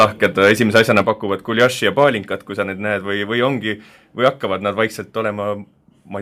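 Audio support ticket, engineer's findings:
Microphone overload at 0.0–1.0 s (about 8 dB over), 1.59–1.65 s (about 3 dB), 2.00–2.04 s (about 1 dB) and 4.26–4.28 s (about 2 dB). Likely mic input gain set too high, driving the converter past its limit. Waveform shows flat-topped peaks on a few percent of samples. Spectrogram shows broadband distortion smear above the speech harmonics.

Microphone volume stepped down at 1.02 s (about −4 dB), 2.04 s (about −3 dB) and 5.10 s (about −2 dB). Likely caused by call software automatic gain control reacting to the loud input. The first two steps follow overloaded stretches directly. Waveform envelope drops in a single step, and the spectrogram background floor darkens at the same instant.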